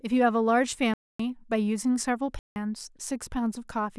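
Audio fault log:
0.94 to 1.20 s and 2.39 to 2.56 s: block of digital silence. The speech drops to silence for about 260 ms, then about 170 ms, which fits a 4096-sample block. A hard cut at each edge, not a fade or a low noise floor, sets it apart from a level dropout.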